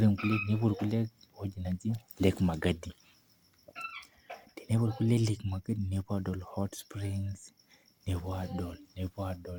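No technical faults are audible.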